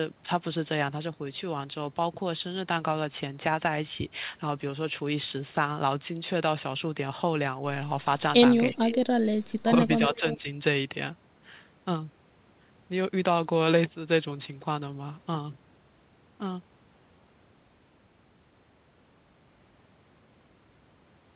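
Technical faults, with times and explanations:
8.72–8.95 s, 9.64–9.71 s and 10.15–10.48 s, speech suppressed in double talk: the speech dips by roughly 15 dB, 15 dB and 10 dB, for a fifth of a second or less each. This is likely the echo canceller clamping down while both ends talked at once.
8.93–8.97 s and 10.17–10.35 s, echo leak: a faint copy of the speech returns 334 ms and 335 ms late, around 15 dB below the speech. It likely comes from loudspeaker pickup the far end's echo canceller failed to remove.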